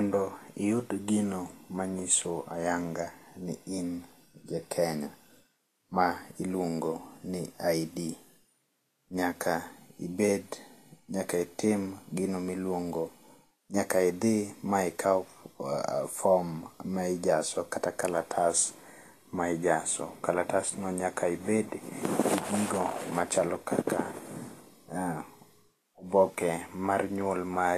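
From start to finish the speech carries a grainy, hissy sheen in the upper range, with consonant attacks smeared and roughened, and nothing at all above about 14.2 kHz. This is likely Vorbis compression at a low setting, consistent with a rate near 34 kbps: the encoder cuts the band at that point and quantises the remaining treble so coarsely that fine detail is replaced by noise of similar energy.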